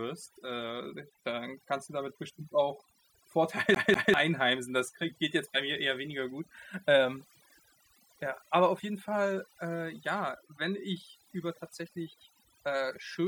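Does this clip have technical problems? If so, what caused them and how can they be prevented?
Yes. Throughout the speech, overdone noise removal shuts individual frequency bands whenever they dip near the estimated noise level, taking quiet parts of the voice with them. The result is a near-silent background broken up by twinkling specks. Those isolated tonal specks in the gaps, rather than a general smeared dullness, set it apart from low-bitrate codec damage. Prevention: use a gentler reduction amount and check the pauses for musical specks.

From 3.75 to 4.14 s, a CD stuck on one turn replays the same segment of about 0.2 s twice, with a brief mute at each jump as a scratch throws the laser back one track. The perfectly even loop length and clean mutes distinguish it from irregular network stutter. Prevention: clean or replace the disc and rip it with error-correcting software.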